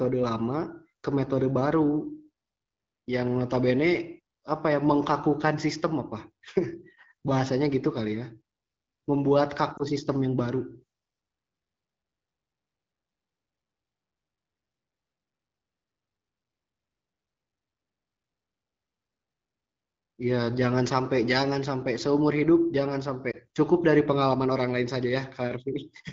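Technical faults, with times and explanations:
9.77–9.83 s and 23.31–23.36 s, lost AMR speech frames: each is a single missing 20 ms frame. The decoder fills it by repeating the previous pitch and vocal tract settings at reduced gain. The result is a short dip or warble rather than the hard silent gap or click of a plain dropout.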